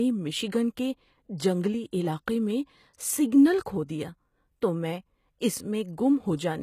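Throughout the speech, the treble sounds rebuilt rather than recorded, with gritty, metallic s sounds and nothing above 14.9 kHz. This is likely HE-AAC compression at a rate near 20 kbps. At 2.93 s, just after "علاقے میں", pre-echo puts a brief hiss of about 12 ms ahead of an attack, as block-spread quantisation noise softens the onset.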